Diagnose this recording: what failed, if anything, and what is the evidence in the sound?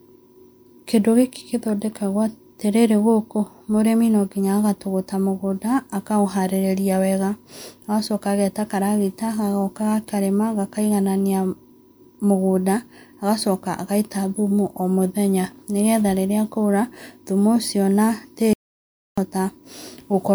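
At 18.53 s the speech cuts off mid-flow and goes to dead digital silence until 19.18 s, an audio dropout to silence lasting about 0.64 s. The gap carries no room tone or noise floor: the waveform is flat and the spectrogram shows a fully blank column with hard edges. The input was likely lost upstream of the recorder, at the device, link or a mute, while writing continued with zeros, so that stretch of speech is gone.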